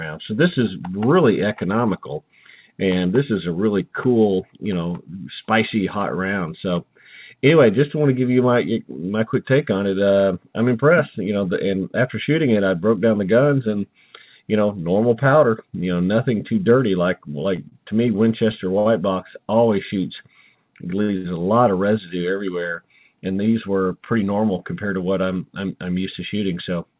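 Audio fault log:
17.69 s, 18.79 s, 21.02 s, 21.17 s: short stall from a late packet. Four times a packet arrived after it was due and the jitter buffer ran dry, so the receiver held the last sound until it came, for about 26 ms, 67 ms, 67 ms and 76 ms respectively, then resumed from the same point. Nothing is lost, but each spot has a sound held too long with a buzz or dip, and the last two fall close together.
23.16–24.23 s: jitter buffer speed-up. The buffer held more audio than its target, so the receiver trimmed short pitch-period pieces repeatedly to catch up, removing roughly 150 ms over this stretch. The result runs at about 111% speed with the pitch unchanged, which is past the point where the audio sounds hurried. The band above 4 kHz is empty across the clip, which fits the 64 kbps G.711 mu-law call codec on this path.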